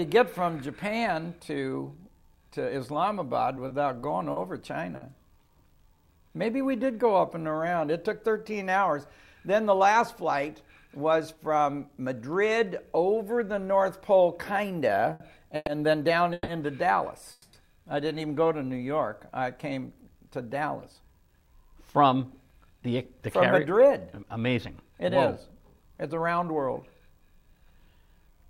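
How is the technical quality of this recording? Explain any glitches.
The recording shows network delivery problems typical of a real-time call: the playback timing repeatedly stalls, stretches and compresses, though little or no audio is lost.

Repeated stalls (stutter) occur from 3.55 to 5.04 s and again from 15.13 to 16.51 s. Packets arrived late, and the jitter buffer kept running dry, so the receiver extended the last sound to cover each wait. The first run has five short gaps, 140 ms in total, none longer than 50 ms. The second has three gaps totalling 330 ms, the longest 150 ms. Both produce a choppy, dragging stutter.

Jitter buffer slow-down occurs from 5.75 to 7.92 s, with playback at 93% speed that adds 156 ms, and briefly from 18.48 to 18.79 s, at 89% speed that adds 42 ms. The receiver built up a reserve by repeating pitch periods, so the sound drags at unchanged pitch.

Jitter buffer speed-up runs from 9.95 to 12.22 s at 108% speed, trimming about a fifth of a second, and from 20.55 to 26.52 s at 106%, trimming around a third of a second. 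Excess buffered audio was cut in small pitch-period slices, which makes the sound hurried but leaves the pitch unchanged.

From 17.32 to 17.56 s, the sound is held as a fading continuation for 210 ms without dropping to silence. Playback then resumes where it stopped, about 210 ms later than before. This is a call audio freeze, likely caused by packets held up in transit that emptied the jitter buffer.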